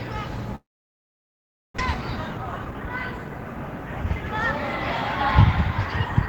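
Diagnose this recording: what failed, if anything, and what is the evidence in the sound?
Long network dropout, likely on the network side: from 0.55 to 1.80 s the sound fades into about 1.1 s of near-silence, then returns with roughly a second lost.

Jitter buffer speed-up right after, 1.94 to 3.28 s: the buffer trims tiny pitch-period slices, so the audio runs about 115% fast at unchanged pitch, shedding around 0.2 s of backlog.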